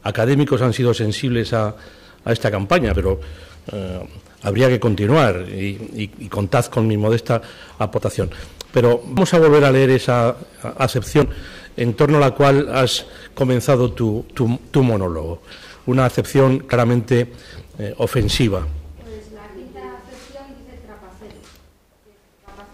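A harsh, crackling edge rides on every loud peak from start to finish. This is hard clipping: the level is driven about 11 dB beyond what some stage in the chain can pass, so a few percent of samples have their tops sheared flat. Those squared-off peaks throw harmonics high into the spectrum, which is the gritty fuzz heard whenever the sound gets loud.

Six times the sound jumps forward with no gap: at 2.94, 7.98, 9.17, 11.22, 16.73 and 21.46 s. Each is likely a dropped buffer (overrun), where the capture program fell behind and the hardware overwrote samples before they were read, so the two sides were spliced together. The losses are roughly 40 ms at 2.94, 7.98 and 16.73 s, about 100 ms at 11.22 and 21.46 s, and around 150 ms at 9.17 s, the longest skip.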